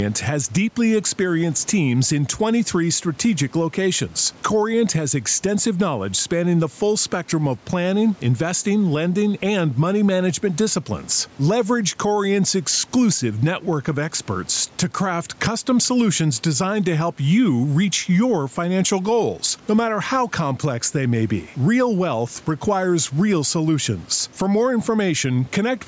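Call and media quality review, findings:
Gain pumping, throughout the speech: gain ducks by around 10 dB under each louder syllable, dynamics squashed. Likely cause: input gain set far too high, fast limiter/compressor clamping every peak. Room noise about 34 dB below speech.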